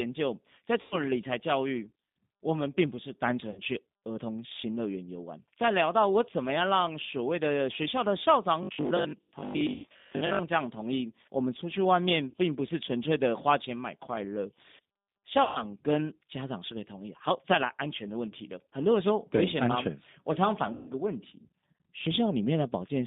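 From start to finish the speech sounds narrow, slightly rough and synthetic, confined to roughly 150 Hz to 3.7 kHz with nothing above. This is the G.729 codec, plainly audible here, which fits the 8 kbit/s G.729A variant. Rather than sending the waveform, it rebuilds each 10 ms frame from a vocal tract filter, a pitch predictor and a few pulses, so the fine texture of the voice is lost.

Six times the voice smears into a buzzy tone or coloured noise that fades and then recovers weakly: at 0.81 to 0.98 s, 3.51 to 3.61 s, 9.74 to 9.87 s, 12.30 to 12.34 s, 15.43 to 15.64 s and 20.73 to 20.90 s, covering gaps of 100, 60, 100, 40, 120 and 140 ms. This is VoIP packet loss concealed by the speech codec. The decoder stretched its last pitch and filter with falling gain, and because each frame builds on the previous one, the distortion lingers after the stream resumes.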